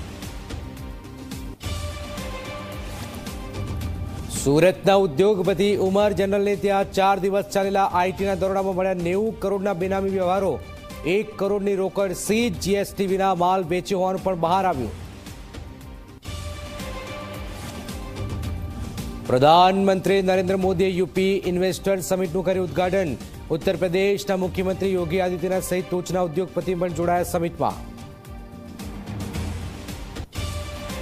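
Nothing stood out as a technical problem on listening to the audio.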